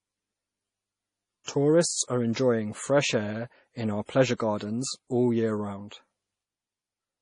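Right from the start, the whole speech clip has a watery, swirly texture, with nothing above about 10.5 kHz and smeared, chirpy sibilants. That's heavy MP3 compression damage, likely from a starved encoder at something like 32 kbps zeroing weak frequency lines frame to frame.

Pre-echo shows up at 1.44 to 1.48 s, 2.33 s, 4.06 to 4.09 s and 4.37 to 4.40 s. Each time, a short hiss of 19 to 41 ms creeps in ahead of a sharp attack, because the codec spread its quantisation noise evenly across the block, softening each onset.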